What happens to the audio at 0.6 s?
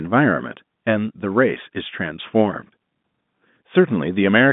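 Nothing goes wrong at 0.6 s: the speech carries on intact there, heard through the narrow band of G.711 telephone coding with no dropout, click or distortion at that moment.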